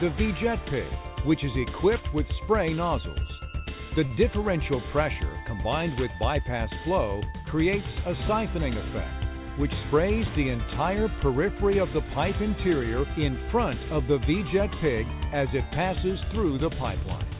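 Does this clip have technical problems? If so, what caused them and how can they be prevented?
Yes. From 4.06 to 4.13 s there is a short stall from a late packet. A packet arrived late, the jitter buffer ran dry, and the last sound was held for about 46 ms before playback resumed from the same point. Nothing is lost, which separates it from true loss, but all later audio now plays about 46 ms later. A deeper jitter buffer target or a steadier network path would prevent it.

Right after, from 4.15 to 4.19 s, comes a short concealed packet loss. A 20 ms piece never reached the decoder, and the receiver filled the gap by extending the preceding sound, producing a brief smear. Unlike the stall, that 20 ms of content is actually gone. Forward error correction or redundant packets on a lossy link would prevent it.

From 17.05 to 17.35 s there is a jitter buffer speed-up. With more audio buffered than its target, the receiver trimmed roughly 40 ms by cutting out short pitch-period pieces, so playback runs at 110% with the pitch unchanged. 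It sounds hurried rather than smeared or held. Avoiding bursts of delayed packets that build up excess delay would prevent it.

The band limit at 4 kHz is expected from the G.711 mu-law call path and fits a 64 kbps setting.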